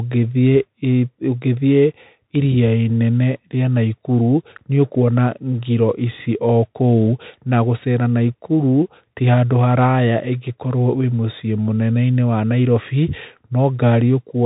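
Speech squeezed through a Bluetooth CVSD headset codec for the whole clip: nothing gets past about 3.8 kHz, and the one-bit slope coding leaves a grainy hiss and rough s sounds, plainly audible and consistent with a 64 kbps CVSD link.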